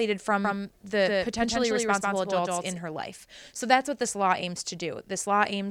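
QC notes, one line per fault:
0.45–2.79 s, doubled audio track: the speech is shadowed by a second full-band copy about 150 ms behind and roughly 5 dB quieter, with no room colour, cutting in and out abruptly before "her life"; likely a second, slower capture path mixed in.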